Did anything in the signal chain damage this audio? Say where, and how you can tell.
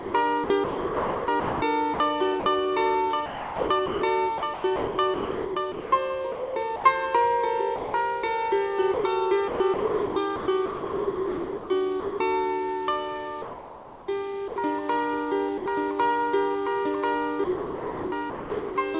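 Yes, the damage comes from call processing at the sending end. The audio has no content above 4 kHz, which fits a G.711 call path.

Sound chopped by the voice detector appears at 0–2.46 s, 3.26–6.84 s, 8.94–12.2 s, 13.42–14.56 s and 17.44–18.76 s. In each stretch the sound breaks up repeatedly, with gaps filled in. Altogether, roughly 0.7 to 2 s per stretch is replaced. The likely cause is a voice activity detector toggling transmission on and off, with the receiver filling each gap with comfort noise.

Sound dropped by the voice detector occurs at 7.76–7.94 s (180 ms) and 15.58–15.66 s (80 ms). In both places the sound gives way to a fill and returns once the gap ends. That fill points to comfort noise standing in for the missing audio. The likely cause is the sender's detector mistaking quiet sound for background and briefly stopping transmission.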